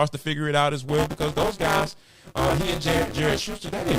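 Speech with buffer tearing from 0.89 s, just after "figure it out as", to the end: a steady robotic 200 Hz buzz where roughly a third of every 5 ms period repeats audio from about 20 ms earlier. The spectrogram shows vertical stripes every 5 ms and a 200 Hz comb, and the waveform shows hard steps at each join.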